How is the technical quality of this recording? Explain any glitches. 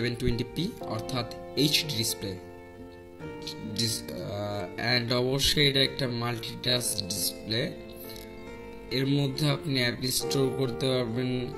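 The recording has one glitch. From 2.32 s to the end, a time-stretched section likely comes from software slowing the audio to 0.58× speed by repeating short pieces, so the pace drops abruptly while pitch holds, leaving the sound dragging.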